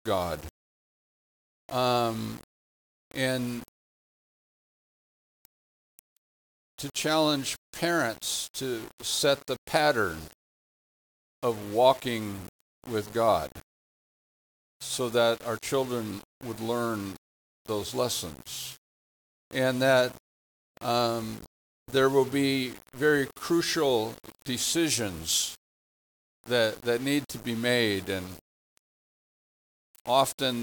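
From start to finish the sound carries a grainy, rasping distortion that rises and falls with the signal, the mark of low bit depth without dither. The likely cause is rounding to very few amplitude steps, which fits roughly 6-bit resolution, leaving an error floor around 20 dB below the signal. On a waveform, quiet passages show visible staircase steps. A spectrogram shows broadband grit that tracks the signal and vanishes in near-silence.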